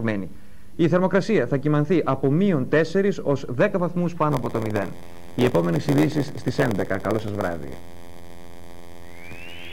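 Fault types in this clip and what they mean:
block size mismatch (padded): from 4.31 s, short blocks are topped up with zeros, fitting a 512-sample read size. This causes an 86.1 Hz buzz and 0.938 times speed at near-normal pitch. Waveform: evenly spaced flat gaps. Spectrogram: regular vertical stripes.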